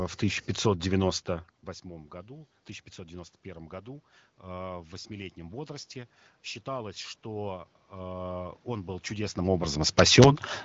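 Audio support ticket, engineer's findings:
Automatic gain rising, 3.43 to 5.97 s. Input level drops by about 18 dB, and the AGC responds by ramping its gain up about 4 dB across those 2.5 s. The result is speech and room noise swelling together, a gradual creep rather than a step. Level changes near 1 s and 9 s are the talker moving, not the AGC. Audio tops out near 7.5 kHz, consistent with AMR-WB at 15.85 kbit/s, with light coding texture.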